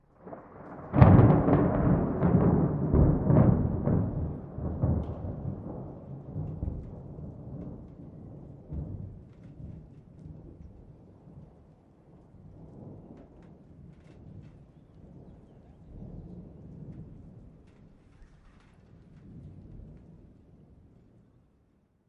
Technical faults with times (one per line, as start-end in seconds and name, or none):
none